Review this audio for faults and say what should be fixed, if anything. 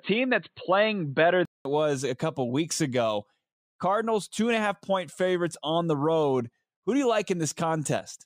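From the start to 1.65 s the speech sounds dull and boxy, with nothing above 4.3 kHz and a faint added noise, then clears after a 200 ms silence at no change in level. The likely cause is an input switched to a poorer device, whose narrower band and own noise floor shaped the opening. Lock the recording input to the intended microphone before capture begins.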